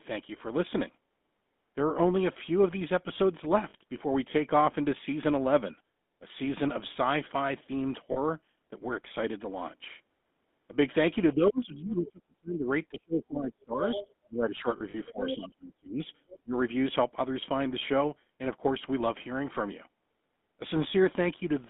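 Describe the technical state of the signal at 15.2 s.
At 15.2 s the GSM full-rate codec's buzzy, gravelly roughness persists, pointing to a 13 kbps GSM line; a spectrogram shows energy confined between 200 Hz and 3.6 kHz.

From 15.07 to 15.36 s the other side's voice leaks through, around 10 dB below the speech, likely left behind by an echo canceller; it appears as a separate voice overlapping the main one.

From 15.11 to 16.01 s the speech is suppressed in double talk, likely because the canceller turned down the local voice along with the loudspeaker echo. The waveform dips by up to around 35 dB over about 0.7 s in total.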